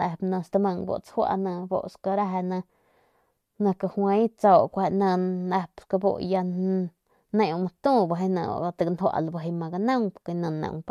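No technical faults are audible.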